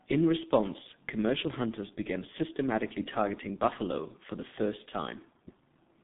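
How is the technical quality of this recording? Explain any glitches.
The technical quality is poor. The speech has been through a very low-rate telephony codec.

The G.723.1 codec affects the whole clip. This codec squeezes speech into 30 ms frames at a rate that fits about 6 kbit/s. The sound is confined to roughly 150 Hz to 3.7 kHz. Nothing above that survives. The voice model updates slowly between frames, so fast changes get smeared. The damage is heavy. Speech sounds muffled and hoarse, and consonants blur together.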